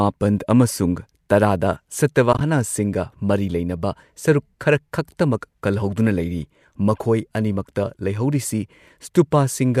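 At 2.33 to 2.41 s the speech breaks up into a few soft-edged gaps, which is AAC frame loss with muting. About 50 ms of audio is missing across an 80 ms stretch, in short runs no longer than roughly 20 ms. That pattern fits a handful of lost short frames whose spectra the decoder set to zero. The overlapping windows fade each gap out and back in, so the dropouts sound like soft-edged holes. The light coding texture throughout is likely from AAC-ELD at 64 kbps.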